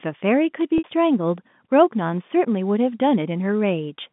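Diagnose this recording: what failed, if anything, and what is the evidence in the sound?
Network stage: packet loss with pitch repetition. From 0.78 to 0.84 s the speech freezes into a held, buzzy tone that fades out, bridging 60 ms of lost audio, which fits three 20 ms packets going missing. The receiver repeated the last pitch period to bridge the gap.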